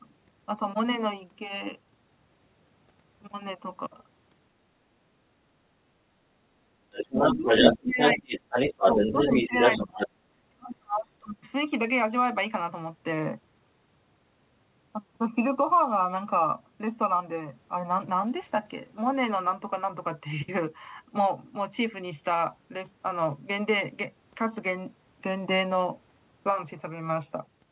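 From 6.92 to 7.79 s, a second voice sits under the talker at about 5 dB louder than the talker. This is the other side's voice leaking through, likely because the loudspeaker signal was picked up by the microphone and the echo canceller left part of it in. The same leakage returns from 7.98 to 10.07 s at about equal level, band-limited like the rest of the audio, which stops near 4 kHz, consistent with a 64 kbps narrowband G.711 call path.

Overlapping these stretches, the talker's speech is suppressed in double talk. It dips by around 20 dB between 7.12 and 7.5 s and by around 25 dB between 7.72 and 8.32 s. A shallower dip of about 10 dB follows from 8.79 to 9.55 s. From 9.84 to 11.36 s it drops by as much as 40 dB, with about a second and a half affected. The likely cause is that the canceller, faced with both sides at once, attenuated everything to suppress the echo.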